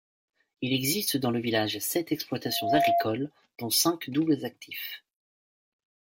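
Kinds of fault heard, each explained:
Loudspeaker feedback squeal: the mic is hearing the speaker it drives, and around 687 Hz the loop gain tips past one, so that frequency keeps feeding itself. You can hear it kick in at about 2.45 s, swelling over roughly a third of a second into a steady squeal that sits a few dB above the speech. It stays there until about 3.12 s, when the loop evidently gets broken and it stops.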